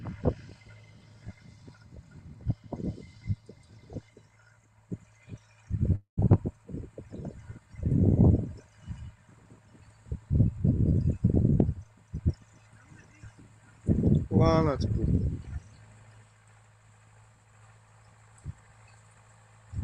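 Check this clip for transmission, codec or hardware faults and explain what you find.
One fault stands out, a long network dropout from 5.95 to 6.19 s. The last sound is stretched into a fading buzz or hiss for about 0.2 s, then roughly 0.1 s of silence follows, and playback resumes with about 0.2 s of material simply gone. The likely cause is a stall in packet arrival that the receiver bridged with concealment until it gave up. Unlike a brief packet loss, the concealment here runs out and decays to silence, and the missing stretch is never recovered.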